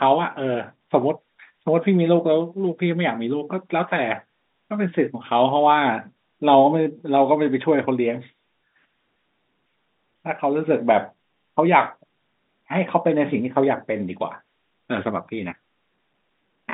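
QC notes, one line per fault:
Nothing stood out on listening to this telephone-band speech recording.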